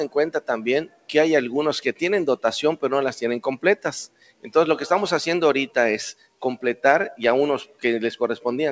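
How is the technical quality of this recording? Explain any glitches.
The recording is compromised by a speech noise suppressor working on non-speech material. The top end stops near 8 kHz, which fits a wideband call codec such as G.722 at 64 kbps.

A noise suppressor applied to music or sounds runs through the whole clip. Tuned for speech, it treats sustained tones, room ambience and reverberant tails as background noise and pulls them down, while transients pass largely intact. The gain keeps shifting by roughly 15 dB, so the sound pumps and thins, with held material sinking between attacks.

Sound cut by the noise suppressor shows up at four points: 0.85 to 1.1 s, 4.07 to 4.52 s, 6.13 to 6.42 s and 7.65 to 7.84 s. Here the suppressor classed the signal as noise and attenuated it harder, by about 18 dB in the first three and about 16 dB in the last. Sustained or decaying sound sinks in level, so those stretches go hollow and tails are cut short.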